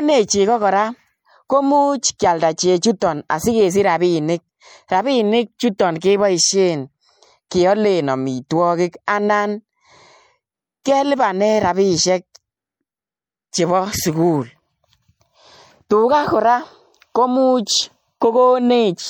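Throughout the speech there is a plainly audible watery, swirling quality, with sibilants turning metallic and consonant attacks softened. This is likely MP3 compression at a bitrate that fits roughly 64 kbps, where weak frequency lines drop in and out between frames; the content stops at about 20.7 kHz.

At 10.83 s a short hiss smears in about 19 ms ahead of a sharp attack, blunting its onset. This pre-echo happens because the codec spreads quantisation noise across the whole block, so noise meant for the loud transient also fills the quiet moment before it.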